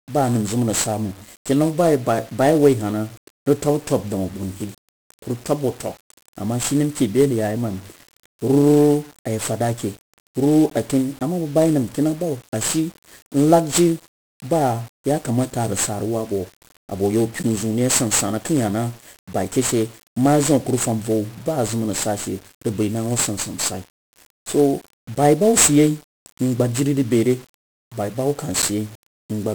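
Speech, heavily damaged by 1-bit DFPWM compression throughout. Each sample carries a single bit that pushes an adaptive level up or down. The waveform can only be tracked coarsely. The result is strong broadband quantisation noise. The voice sounds fuzzy and crackly from start to finish. The high end is buried under hiss. The damage is heavy, which fits a rate of about 48 kbps at one bit per sample.

There are also three blocks of digital silence, at 10.7 s, 17.43 s and 28.62 s. The first lasts about 15 ms, the other two 10 ms each. The audio drops straight to silence and returns with no fade. At these lengths they come across as ticks or dips rather than audible holes. Such dropouts most likely come from the output buffer not being filled in time.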